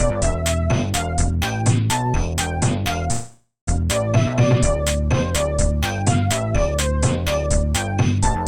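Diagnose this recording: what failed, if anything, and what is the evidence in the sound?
A call audio freeze runs from 3.11 to 3.69 s, and the network stage is the likely cause. At 3.11 s the sound stops advancing. The last moment is stretched into a fading buzz, which ends in about 120 ms of silence. The receiver had nothing new to play. Its jitter buffer had run dry while packets were held up. At 3.69 s the audio resumes exactly where it stopped. Nothing is lost. Everything after it plays about 0.56 s late.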